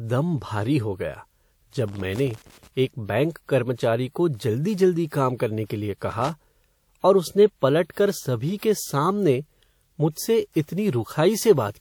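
From 1.88 to 2.68 s, and again from 6.11 to 6.30 s, the speech breaks into an irregular burst of crackle and scratching: loose connector crackle, where a worn or dirty contact makes and breaks as it moves, chopping the signal.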